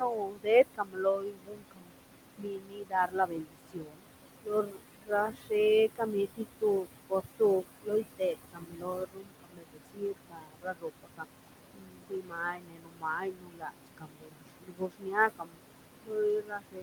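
Noise suppressor artifacts run through the whole clip: the suppressor pulls the bands it judges to be steady noise down by about 21 dB frame by frame. The room noise, sitting about 9 dB below the speech, dips between phrases and surges back under them.

Speech cut by the noise suppressor comes at 0.00–2.04, 2.37–4.02, 4.43–5.52, 5.96–11.26, 11.74–15.60 and 16.04 s to the end. The suppressor misreads quieter parts of the speech as noise and drops them by about 21 to 22 dB, leaving endings and soft consonants faint and swallowed for roughly 0.7 to 1.5 s at a time, and several seconds in the two longest spans.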